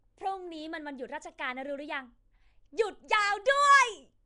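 From start to finish the speech carries a rough, hissy halo and a smeared, underwater blur, with nothing above 10.7 kHz. The cause is likely Nellymoser compression, whose coarse fixed bit budget, consistent with roughly 44 kbps, leaves weak bands empty and fills them with noise.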